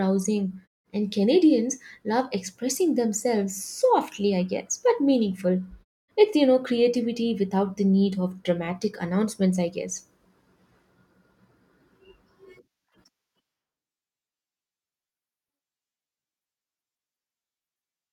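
No faults found in this speech recording; the background dropping out during pauses is intended gating, and no speech is lost.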